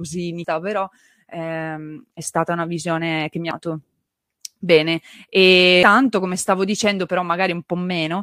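At 0.44 s, 3.51 s and 5.83 s the speech breaks up briefly. These come from damaged data in a compressed stream. Corrupted bytes make the decoder misread frames and lose sync. It then hunts for the next valid frame header.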